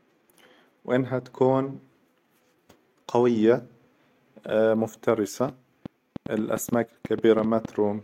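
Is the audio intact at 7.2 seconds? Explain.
No, 7.2 seconds falls inside a train of clicks running from about 5.49 to 7.66 s. You get roughly fifteen clicks, averaging 5.55 per second but unevenly spaced, with peaks about 5 dB above the speech, so they poke right through and tick away in the gaps too. They all have much the same shape, which points to something injecting a repeated pulse, likely interference from nearby gear or a faulty connection or power supply.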